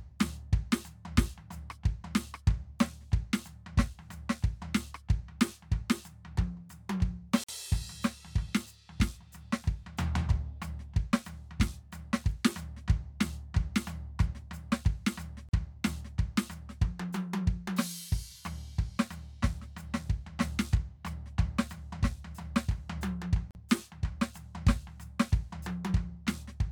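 At 7.44, 15.49 and 23.51 s, the music stops for 48, 42 and 42 ms: a gap at a join of encoded pieces, where untrimmed encoder delay and padding remain. Unlike a dropout, nothing is lost, and the music resumes exactly where it stopped.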